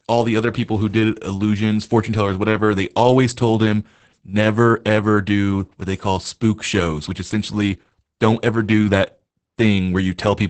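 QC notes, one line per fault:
Throughout, Opus voice compression: the speech sounds muffled and hoarse, with a faintly robotic edge. Nothing comes through above about 8.7 kHz, which fits wideband SILK running at around 10 kbps, so the excitation is coded coarsely.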